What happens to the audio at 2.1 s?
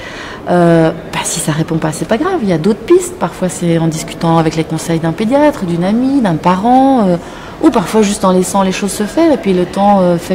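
At 2.1 s the audio is in a stretch of hard clipping. It runs from 1.86 s to 2.14 s. The signal there is about 3 dB hotter than the stage can pass. Its peaks are sliced off flat at the limit. Those squared tops add harmonics high in the spectrum. With this modest overload, the result is a gritty crackle on the loudest moments. The harshness ends just after 2.1 s.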